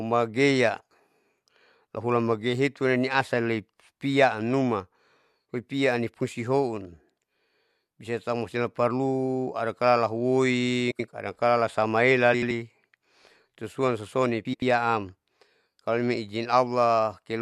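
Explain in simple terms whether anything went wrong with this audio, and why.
Three short stretches of this speech have frames out of order. At 10.91–11.08 s, 12.33–12.51 s and 14.45–14.63 s, two neighbouring 85 ms blocks play swapped, causing a garbled flutter, though no time is lost.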